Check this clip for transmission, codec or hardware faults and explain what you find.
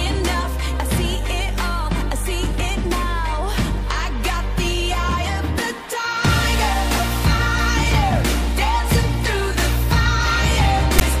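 There is one fault, near the very end of the clip.

File tags played as audio, 10.99 to 11.01 s: a block of text tags followed by zero padding was decoded as if it were samples. The text bytes become a loud, rasping burst biased to one side with hard edges, and the padding drops to dead silence.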